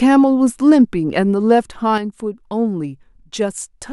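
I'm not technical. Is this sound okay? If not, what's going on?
No. At 1.98 s there is a sudden gain jump. The speech and background noise drop to noticeably quieter together and stay there. Likely a volume setting switched instantly, without a smooth fade.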